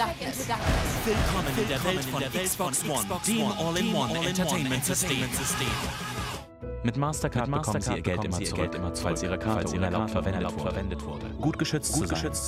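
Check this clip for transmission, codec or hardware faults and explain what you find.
There is one fault, a doubled audio track, present across the whole clip. A second copy of the same sound trails the original by about half a second. It plays at roughly the same level. The copy is full-band, with no decay or room colour, so it is not an echo. The likely cause is a second capture through a slower path, mixed back in out of step. Every event is heard twice, creating a stuttering, confused texture.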